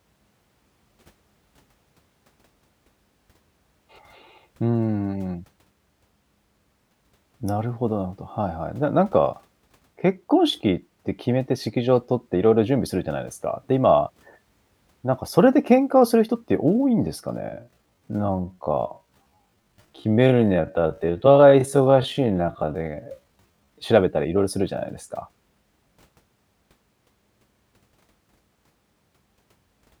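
From 17.38 s to 23.82 s the speech abruptly slows to roughly 0.58 times its pace, dragging while its pitch stays put. This time-stretched section was likely produced by software lengthening the audio, repeating short pieces to preserve pitch.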